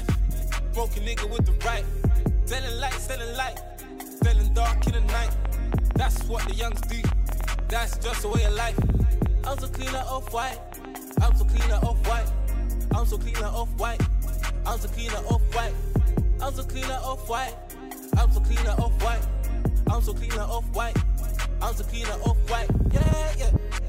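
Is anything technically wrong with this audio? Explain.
Yes, there is a train of clicks from 4.82 s to 11.61 s. About 50 sharp pulses of much the same shape arrive at roughly 7.2 per second, unevenly spaced, peaking a few decibels above the sound and ticking through quiet gaps too. The likely cause is interference from nearby equipment or a faulty connection or power supply injecting pulses. Unlike random crackle, the clicks are uniform and confined to one stretch, and unlike a single pop they keep recurring for almost seven seconds.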